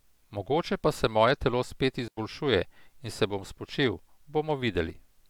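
A digital wireless dropout cuts into this speech clip from 2.08 to 2.17 s, leaving a hole of near silence about 95 ms long. The link between transmitter and receiver lost more data than its error correction could repair, so the receiver muted its output with a very brief fade rather than passing on corrupted audio. That is why the gap sounds clean, with no crackle or noise burst on either side, before the sound resumes as abruptly as it stopped.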